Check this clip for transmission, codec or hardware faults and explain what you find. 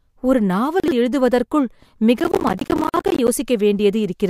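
Three kinds of fault are present in this speech: a brief scramble of out-of-order chunks, two short silences at joins between separately encoded pieces, and a stretch of processor overload crackle.

Chunks out of order, 0.80 to 0.92 s. The audio is cut into 40 ms chunks, and one arrives two chunks late, so it plays after material that should follow it. Nothing is missing, but the sequence jumps back and then forward, leaving three hard joins. It is heard as a quick garbled stutter. On the waveform the cycle pattern breaks abruptly at each join. On a spectrogram, formant tracks jump rather than glide, with thin vertical click lines at the joins.

Gap at a join of encoded pieces, at 0.91 s and from 2.89 to 2.94 s. Pieces were encoded separately and joined without removing each encoder's start-up delay and final-frame padding, so silence stays in the stream. The gaps are 42.7 ms and 48.8 ms. 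Each drops the sound out briefly, and it then resumes where it stopped. The waveform shows a flat hole with slightly softened edges. On a spectrogram it appears as a narrow blank column across all frequencies.

Processor overload crackle, 2.20 to 3.28 s. The processor repeatedly misses its deadlines for small buffers. The spacing fits buffers of around 10 ms, and about fifty are missed, each replaced with silence. The result is a dense gritty tearing that rides on the speech for about a second and stops once the load eases. The waveform is riddled with tiny flat dropouts with sharp edges. On the spectrogram they form a comb of vertical broadband streaks.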